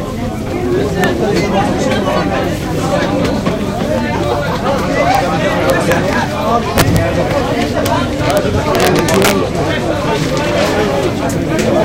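Integer overflow cracks at 1.04, 5.15, 5.70–5.92, 6.78–6.97, 7.86, 8.30–8.37 and 8.75–9.31 s: loud peaks, overdriven by up to about 8 dB, wrap to the opposite sign instead of limiting. On the waveform they appear as sign-flipped spikes; on the spectrogram, as vertical broadband streaks.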